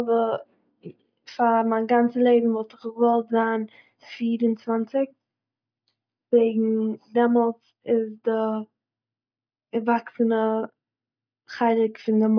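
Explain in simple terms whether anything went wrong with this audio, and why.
Listening closely, nothing in this recording stood out as having gone wrong at any point.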